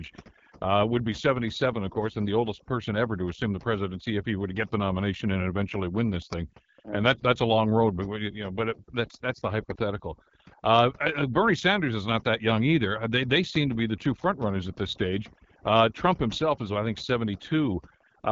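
It's a speech recording with two problems running the whole way through. First, overdone noise removal: the denoiser was pushed too hard, so quiet parts of the voice get gated away along with the background noise. The background drops and breaks up into little twinkling specks. Second, it's been through the AMR wideband (HD Voice) codec, and the rough, raspy grain points to one of its low rates, around 8.85 kbit/s. The damage is plainly audible, and there's nothing above 7.5 kHz.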